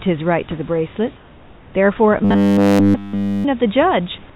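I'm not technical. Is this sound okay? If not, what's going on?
No. From 1.16 to 1.74 s, the sender likely paused sending during a quiet moment. This is comfort noise in place of the background: the real room sound becomes a flat, slightly quieter hiss.

From 2.25 to 3.45 s, audio likely arrived too slowly, so the system kept replaying tiny 10 ms pieces. This robotic sound from repeated short buffers gives the speech a metallic 100 Hz buzz throughout.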